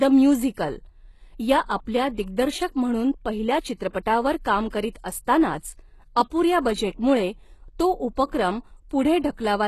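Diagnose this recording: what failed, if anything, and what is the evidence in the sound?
The treble of the speech is rebuilt rather than real: sibilants sound gritty and metallic, and nothing survives above 12.3 kHz. Codec stage, likely HE-AAC compression at a low bitrate near 16 kbps. Spectral band replication copies lower bands upward, so harmonics misalign across the crossover.

Pre-echo, also codec stage: a short hiss smears ahead of attacks at 3.89–3.95 s, just after "म्हणून पहिल्या"; at 4.68–4.72 s; and at 4.90–4.95 s, just before "असतानाच अपुऱ्या बजेटमुळे तो". Each spans 40 to 56 ms, where block-wide quantisation noise leaks before the transient.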